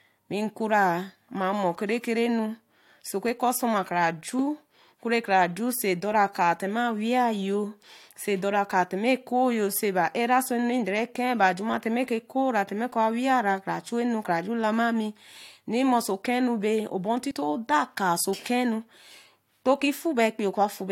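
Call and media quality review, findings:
Damaged data in a compressed stream at 17.30 s, right after "okenu be obor". Short blip. Probable component: decoder input. Corrupted frame bytes. Decoder misreads the frame, loses sync, jumps to the next valid header. Brief glitch.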